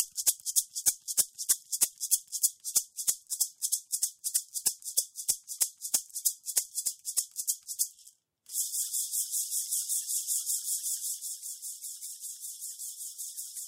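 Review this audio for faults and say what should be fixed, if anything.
Nothing here needs fixing, as no faults can be heard anywhere in the audio. The level rises and falls smoothly in places, like a fader being moved, and those changes glide evenly without jumps or steps.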